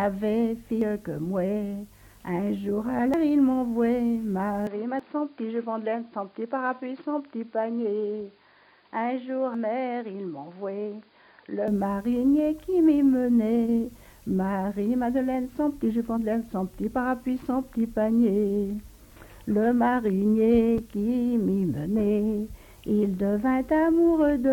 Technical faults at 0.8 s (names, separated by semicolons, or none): damaged data in a compressed stream